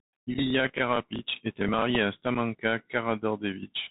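Speech carried over a Bluetooth CVSD headset codec: nothing passes above 4 kHz, s sounds are scratchy, and granular hiss sits underneath, unlike the smooth muffling of a simple low-pass, consistent with a 64 kbps CVSD link. Unconcealed Bluetooth headset packet loss leaves abrupt holes of about 7.5 ms at 0.34 s and at 2.35 s after "était marié à". They are sharp-edged gaps with a brief quieter return, not smoothed-over dropouts, which fits losing a couple of packets each time.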